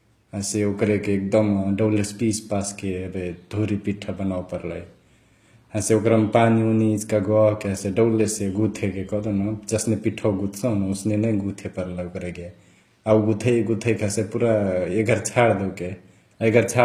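From start to finish, the speech carries plainly audible HE-AAC compression, likely at a low bitrate around 24 kbps. Treble is rebuilt from copied lower bands, so s sounds turn gritty and lispy rather than simply dull, as a plain low-pass cut would leave them.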